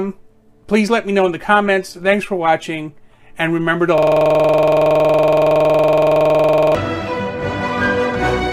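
At 3.98 s the sound suddenly locks into a system hang loop that runs until 6.75 s. It's a tiny slice, about 46 ms, repeating exactly, which fits a 2048-sample buffer. The machine or driver stalled, and the audio hardware kept replaying the same ring buffer about 60 times over. At 21.5 repeats per second it sits right between a buzz and a stutter, a rough, rapid motorboat rattle with no forward motion.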